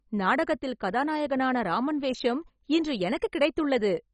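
Throughout, the speech is dull, with nothing above 10.3 kHz and a gurgling, granular texture as upper sub-bands drop out, likely heavy MP2 compression at a very low bitrate.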